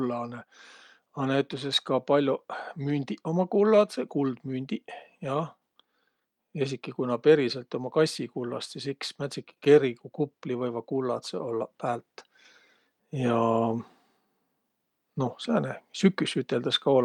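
Speech recording; no technical faults can be heard anywhere.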